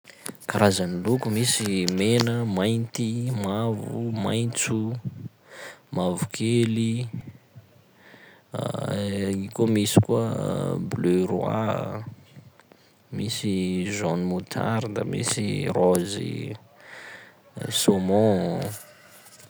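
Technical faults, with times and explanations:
7.21 s: repeated buffer. Fresh audio missed its deadline, so the output replayed its last block of about 1.3 ms, consistent with a 64-sample buffer, four extra times with a hard join at each pass. At that tiny block size the loop registers as a brief buzzy click rather than a stutter, and a few milliseconds of sound are skipped.
8.80 s: repeated buffer. Same underrun with two extra plays of the same short block, heard as a shorter click.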